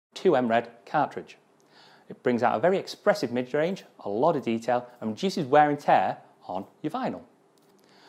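No technical faults are audible.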